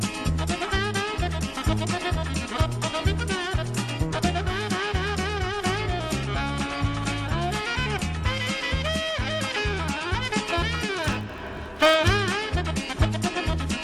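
Block size mismatch (padded) from 11.04 to 11.96 s: one stage delivers blocks slightly shorter than the next reads, which fits a 1024-sample read, so each block ends in a brief zero gap. This gives a 46.9 Hz buzz, with the audio slowing only to 0.999 of normal speed at unchanged timbre.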